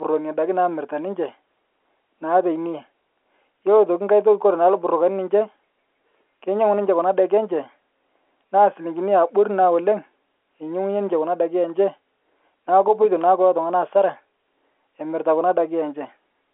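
Nothing in this speech recording is technically wrong. It has the narrow sound of a G.711 telephone line, with the voice confined to roughly the 300 Hz to 3.4 kHz band and nothing above about 3.8 kHz.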